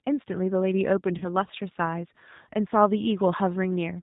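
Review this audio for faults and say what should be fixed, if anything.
The whole clip carries G.729 codec damage, consistent with 8 kbit/s G.729A. The speech is rebuilt from a vocal tract filter, a pitch predictor and a few pulses per subframe, so it sounds plainly rough and synthetic. A spectrogram shows a hard ceiling at 4 kHz with nothing above it. To prevent this, negotiate a wideband codec such as G.722 or Opus instead of G.729 wherever bandwidth allows.

From 1.18 to 1.25 s there is VoIP packet loss concealed by the speech codec. About 30 ms of audio is missing, which points to a single lost packet. The decoder extended its last pitch and filter settings at falling gain, so the speech is briefly stretched into a buzzy tone or coloured noise that fades, and it stays weak for a few frames after the gap. The waveform shows a patch of shrinking amplitude in place of normal speech. To prevent this, fix the network path's loss, or add forward error correction or redundancy for the packet stream.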